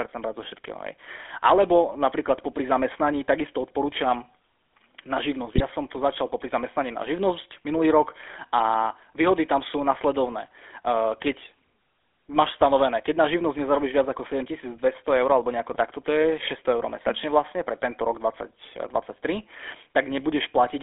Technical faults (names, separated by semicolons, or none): GSM full-rate codec; GSM bit errors